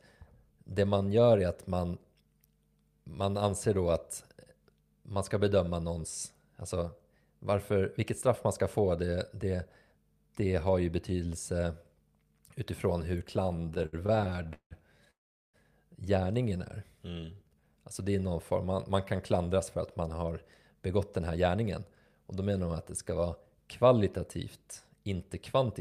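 From 13.43 to 14.73 s, packets kept arriving late, so the jitter buffer ran dry over and over. This produces repeated stalls (stutter): the receiver filled 26 short gaps by extending the last sound, the longest 173 ms, about 515 ms in all. Nothing is lost, but the speech drags and hiccups, with 40% of that stretch held-over sound.

Between 15.11 and 15.56 s there is a call audio freeze, likely from packets held up in transit emptying the buffer. The last sound is carried on briefly and then gives way to about 400 ms of silence. The speech then resumes where it stopped, pushed 430 ms later.

From 16.42 to 17.78 s the buffer was rebuilding its reserve, which causes a jitter buffer slow-down. The receiver repeated single pitch periods and slices of pauses to add 174 ms. The speech runs at 88% speed with unchanged pitch, and its sounds are audibly drawn out.

Later the buffer held more audio than it needed, and the receiver responded with a jitter buffer speed-up, trimming short pitch-period pieces in two stretches. 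From 19.58 to 20.32 s it removed about 70 ms, giving 110% speed. From 20.74 to 22.23 s it removed about 150 ms, giving 109% speed. In both stretches the speech sounds hurried at normal pitch.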